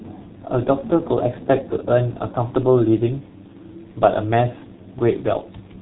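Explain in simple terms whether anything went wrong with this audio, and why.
Something did go wrong, for the whole clip. The speech has passed through the G.723.1 codec, an old internet-phone format. It removes everything above about 3.9 kHz, so the sound is muffled. It damages the voice heavily, leaving it hoarse with smeared consonants.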